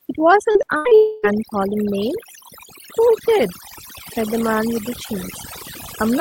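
Throughout the speech, the background sinks and breaks up into twinkling specks. That is overdone noise removal: the suppressor pulls individual frequency bands down whenever they sit near its noise estimate, taking quiet parts of the voice with them.

From 0.51 to 0.93 s the sound turns choppy, with pieces missing. This is repeated packet loss: five short holes, the longest 80 ms, each patched by stretching the previous sound, so nearly half of this span is concealment rather than real audio.

Straight after, from 0.95 to 1.25 s, the last sound is drawn out as a smeared continuation for about 0.28 s, never dropping to silence, and the voice then resumes with that stretch gone. This most likely reflects a long network dropout, where nothing arrived and the receiver extended what it had.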